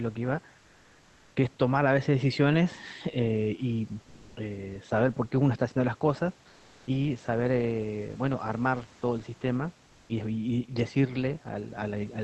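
Comfort noise in place of the background at 0.59 to 1.35 s, 4.03 to 4.35 s and 6.49 to 6.87 s: in these pauses the real room noise gives way to a smooth, featureless hiss, first about 3 dB quieter, then about 5 dB louder, then at the same level. This is likely Opus discontinuous transmission filling the silence with synthetic noise.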